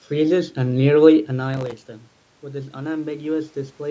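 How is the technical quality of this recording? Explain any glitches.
The recording has one clear glitch, a short burst of processor overload crackle. From 1.54 to 1.85 s the processor missed its deadlines repeatedly, around twenty times. Each missed buffer dropped out as a tiny hard-edged silence. The gaps suggest very short buffers, a millisecond or two each. Together they sound like gritty tearing over the speech, which stops once the load clears.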